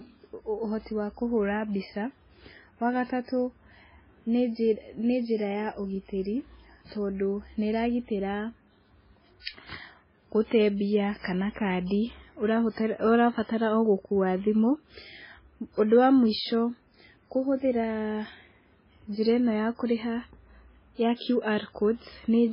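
Throughout, the speech sounds watery and dull, with nothing above 5.3 kHz. This is likely heavy MP3 compression, fitting a bitrate near 16 kbps. From 11.19 to 11.24 s, a pre-echo hiss runs 54 ms before a sharp attack. Codec noise, spread across the whole block, fills that quiet gap.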